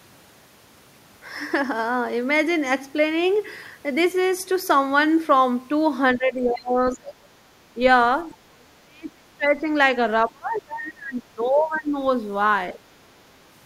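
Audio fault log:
6.16–7.34 s, 7.74–7.8 s, 8.3–9.69 s, 10.26–11.96 s, 12.73–12.78 s: speech suppressed in double talk. The speech level dips in three long stretches, the deepest by about 40 dB, and in two brief blips of about 10 dB and 5 dB. This is likely an echo canceller that cannot distinguish its own talker from the other side's echo, so it attenuates both.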